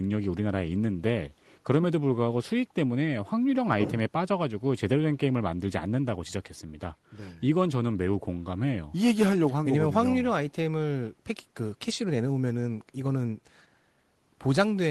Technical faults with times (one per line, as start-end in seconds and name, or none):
none